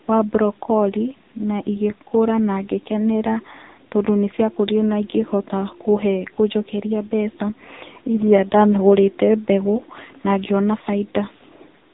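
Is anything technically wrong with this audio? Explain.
Yes. Throughout, the speech passes through the AMR narrowband mobile codec at a low mode, consistent with about 6.7 kbps. Each 20 ms frame is rebuilt from a vocal-tract model fed by sparse pulses, and with 8 kHz sampling nothing survives above 3.8 kHz, and the speech sounds heavily buzzy and synthetic.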